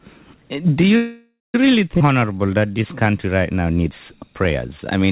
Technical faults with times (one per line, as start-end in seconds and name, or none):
0.96-1.55 call audio freeze
1.99-2.01 skip ahead
2.06-3.12 jitter buffer slow-down